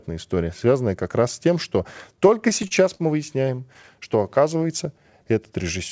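Repeated stalls (stutter) begin right after "раз с тем что", from 2.12 to 3.01 s. Packets reached the receiver late, and the jitter buffer kept running dry. There are eight brief stalls, the longest 49 ms, about 135 ms in all. Each stall is patched by stretching the last sound. Nothing drops out. The speech hitches and drags. A second run follows from 3.45 to 3.85 s. It has four shorter stalls, none over 16 ms, about 40 ms in total.

A jitter buffer slow-down runs from 3.96 to 5.23 s. The buffer was running low or had just raised its target delay, and needed reserve. So the receiver repeated single pitch periods and small slices of pauses. This adds about 128 ms. The speech plays at roughly 91% speed. The pitch holds steady, but sounds are drawn out, with a faint warble in places. Throughout, the call path cuts everything above 8 kHz, which fits a wideband codec such as G.722.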